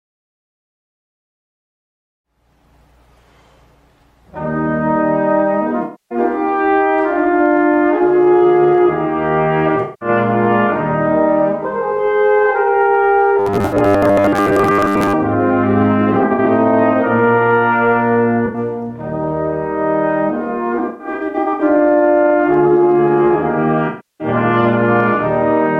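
AAC frame loss with concealment first appears from 5.83 to 6.18 s and again from 9.82 to 10.09 s. Missing frames were patched from the last good spectrum, leaving smeared, noisy or phasey stretches rather than a gap or a repeating pattern.

From 13.39 to 15.14 s the sound turns into a rigid, metallic robotic buzz at 100 Hz. Playback likely fell behind and kept repeating 10 ms buffers. A brief concealment patch sits inside this stretch, from 13.66 to 13.74 s.

Further concealed losses follow at 16.13 to 16.48 s, 18.46 to 18.58 s, 20.78 to 21.62 s and 23.88 to 24.27 s. The 16.13 and 20.78 s stretches are broken into several shorter patches.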